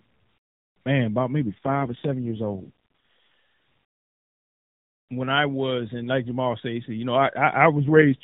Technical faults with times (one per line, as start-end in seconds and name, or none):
1.40-3.23 AMR rate drop
7.78-8.23 AMR rate drop